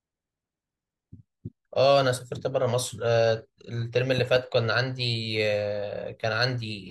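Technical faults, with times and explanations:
4.18 to 4.38 s, loud pop: Two sharp pops arrive in quick succession on top of the speech, which carries on underneath. They peak roughly 10 dB above the surrounding level. The likely cause is a sudden voltage step or pulse entering the signal path, from a plug, a switch or a static discharge. The circuits after that point shape the spike. Each pulse is heard as a sharp pop.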